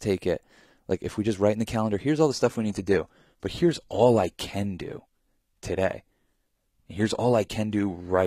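Adaptive stream at a lower bitrate, from 2.30 s to the end of the clip: the speech switches abruptly to a much leaner encoding, with no gap or dropout at the transition. The sound points to a drop from around 96 kbit/s AAC to a roughly 20 kbit/s HE-AAC version, of the kind a player fetches when the connection slows. From that point codec artefacts become more audible, and the treble is cut off above 14.9 kHz.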